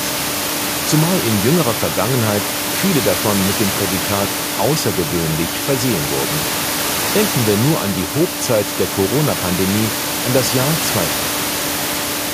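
No technical faults are present.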